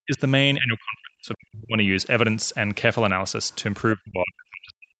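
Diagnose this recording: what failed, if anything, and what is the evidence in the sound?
The speech drops out in call processing, most likely through speech suppressed in double talk, where the echo canceller mistook the talker for loudspeaker echo and pulled both down. The drops fall at 0.01–0.2 s (about 150 ms affected), 0.59–1.83 s (about a second affected) and from 3.95 s to the end, sinking by as much as about 40 dB. The waveform shows the envelope collapsing in chunks. On the spectrogram, energy vanishes in vertical gaps below the 8 kHz ceiling of the Opus path.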